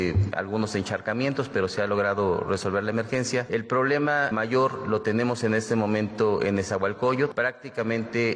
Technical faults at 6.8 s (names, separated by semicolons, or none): none